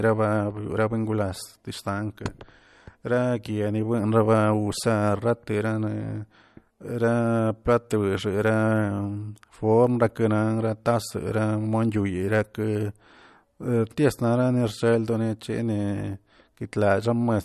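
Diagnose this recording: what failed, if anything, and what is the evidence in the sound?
The codec stage is the likely culprit: lossy MP3 encoding starved of bits, which fits a bitrate near 54 kbps. Throughout the speech, nothing survives above 12.5 kHz, and weak spectral detail flickers between frames, giving a plainly audible watery swirl and smeared consonant attacks.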